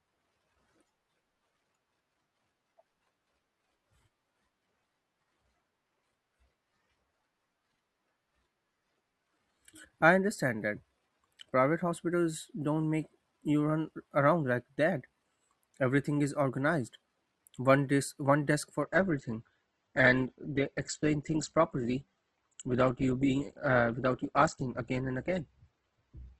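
Speech that, from 18.82 s to the end at 26.40 s, drops abruptly to an adaptive stream at a lower bitrate. Treble vanishes above 8.2 kHz and codec artefacts rise, consistent with a switch to roughly 12 kbit/s. On a spectrogram, the upper band cuts off sharply, with no waveform gap.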